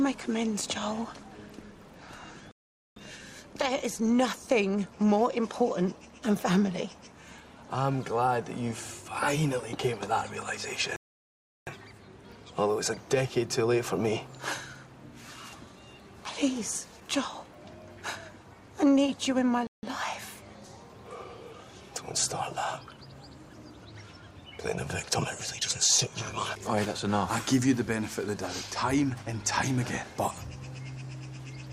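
Playback halts three times in a rebuffering stall: 2.51 to 2.96 s, 10.96 to 11.67 s, and 19.67 to 19.83 s. Each drops to silence, then resumes exactly where it stopped. The player ran dry of downloaded audio. Nothing is lost, but 0.45, 0.71 and 0.16 s are added.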